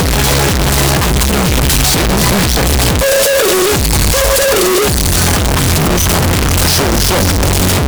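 Signed and unsigned mixed up, throughout: the audio is harsh, very loud distortion even in quiet moments, likely from 16-bit samples read with the top bit flipped.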